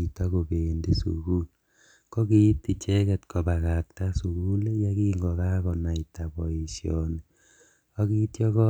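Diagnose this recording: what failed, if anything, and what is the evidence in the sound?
Nothing failed; no stage of the chain sounds faulty.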